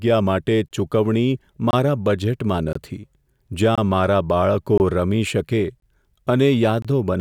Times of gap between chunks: 0.68-0.71, 1.71-1.73, 2.73-2.75, 3.75-3.78, 4.78-4.80, 5.80-5.82, 6.82-6.85

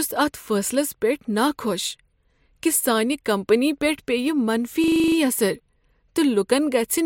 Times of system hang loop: 4.84-5.16

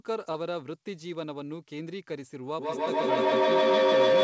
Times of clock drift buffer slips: none

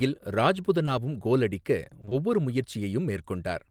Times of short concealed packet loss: 0.85-0.89, 2.01-2.13

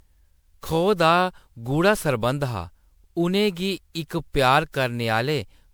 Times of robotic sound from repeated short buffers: none

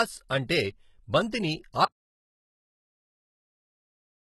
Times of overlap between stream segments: none

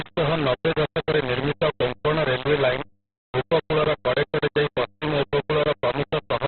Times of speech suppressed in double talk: none

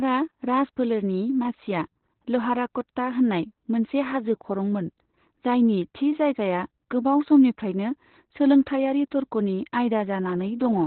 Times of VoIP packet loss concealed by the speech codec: none

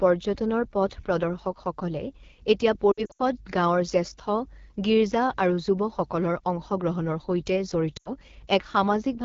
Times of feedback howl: none

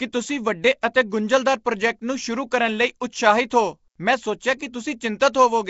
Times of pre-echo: 0.81-0.95

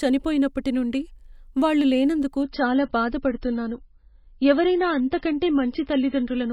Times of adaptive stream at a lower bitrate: 2.43-6.53

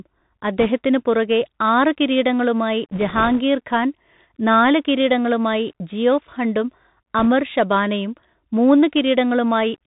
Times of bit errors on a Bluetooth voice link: 0.60-0.66, 2.92-3.40, 7.18-7.25

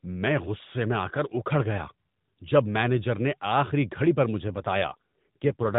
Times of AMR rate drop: 4.48-5.78

